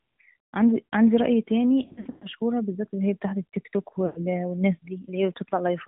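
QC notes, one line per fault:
throughout: AMR narrowband mobile codec. Nothing above 4 kHz survives, and the voice has a buzzy, synthetic edge that fits a 10.2 kbps mode. A plain low-pass band limit would sound muffled but natural, not rebuilt from pitch pulses like this.
1.82–2.28 s and 4.06–4.19 s: lost AMR speech frames. In the first span, about 280 ms of frames drop out across 400 ms, with the longest gap around 120 ms. The decoder stretches the last pitch and vocal-tract shape while fading it, then the voice returns rough. At 4.06 s, 100 ms fades the same way. The smeared, dying tone tells this apart from hard dropouts, which cut to silence or click.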